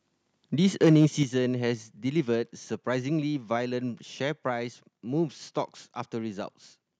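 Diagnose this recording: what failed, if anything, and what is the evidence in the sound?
Microphone overload at the converter stage. From 0.83 to 1.05 s the loudest peaks turn harsh and crackly. Their tops sound flattened, with around 7 percent of samples pinned at the limit. The input was likely driven about 3 dB past full scale.

Microphone volume stepped down, in call processing. At 1.23 s the whole level drops abruptly by about 7 dB. Voice and background fall together. The step comes just after the distorted peaks. The call software likely cut the device input gain in one move.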